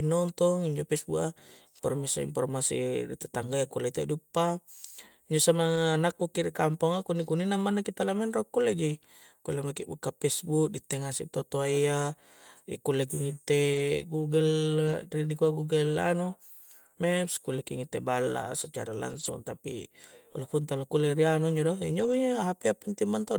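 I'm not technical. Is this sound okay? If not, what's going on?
No. The speech turns briefly rough and grainy at 5.75, 9.83, 13.73 to 13.79, 14.87 to 14.93, 19.11 to 19.29 and 21.99 to 22.13 seconds. Each is a lost packet rebuilt from error correction: the missing piece was replaced by a lower-quality spare copy.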